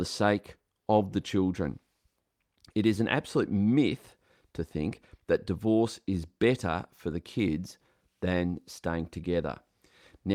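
Nothing stood out as a technical fault at any point while listening to this speech recording.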